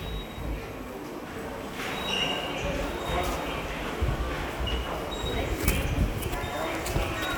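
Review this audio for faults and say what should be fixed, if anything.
No faults found in this recording, so nothing needs fixing.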